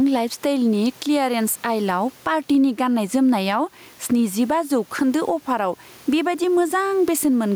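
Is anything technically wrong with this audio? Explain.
Yes. Gain pumping runs through the whole speech clip. The room noise sits about 37 dB below the speech, and the gain swings around 10 dB. The likely cause is excessive input gain with a fast limiter clamping each peak, leaving the speech squashed and flattened in level.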